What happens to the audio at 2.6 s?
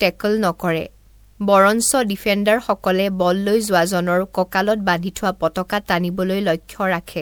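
At 2.6 s the speech carries generation loss that runs through the whole clip: it was likely re-encoded about three times with a lossy codec, with a roughly 20.9 kHz ceiling that fits 128 kbit/s MP3. Each pass re-quantised on a shifted frame grid, so the sound turns swirly, hollow and smeared, with softened attacks.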